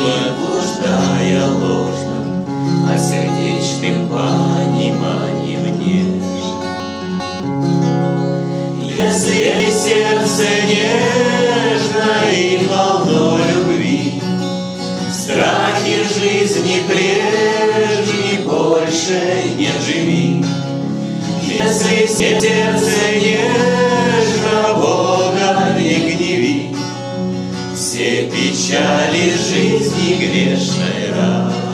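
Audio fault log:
6.8–7.4 s, 9.0–9.6 s, 21.6–22.4 s, chunks out of order: a 200 ms chunk plays two, then three, slots late, scrambling sequence across three hard joins.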